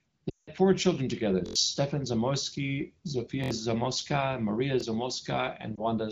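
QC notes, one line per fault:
0.30–0.50 s and 5.75 s, lost AMR speech frames: At 0.30 s about 180 ms of signal goes missing, which fits a run of around nine frames. The decoder keeps re-synthesising from the last good pitch and spectral settings while cutting the gain, so the sound drops to near silence within two frames before recovering rough. At 5.75 s a single 20 ms frame drops, heard as a quick dip or warble.
1.46–1.56 s, 3.44–3.51 s, 4.81–4.83 s, repeated buffer: The same 23 ms slice plays again with a hard seam each time, four extra times at 1.46 s, three at 3.44 s and once at 4.81 s. That fits a 1024-sample buffer being replayed while new audio ran late. It comes across as a short stutter or buzz, swallowing around 100 ms, 70 ms and 20 ms of real sound. The HD Voice codec underneath runs at 15.85 kbit/s, where speech is clear.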